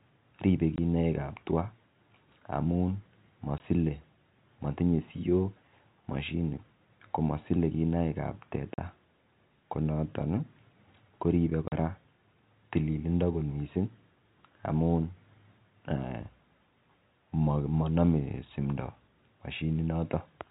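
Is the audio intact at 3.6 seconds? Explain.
No, packet loss filled with silence hits from 3.58 to 3.60 s: one lost 20 ms packet was replaced by silence, leaving a brief hole with hard edges.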